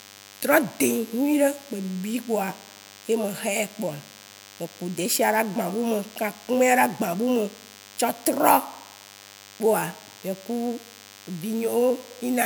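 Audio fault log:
Throughout, DECT cordless phone buzz: a thin, steady 100 Hz buzz full of harmonics sits well under the speech, from a nearby handset's radio bursts getting rectified.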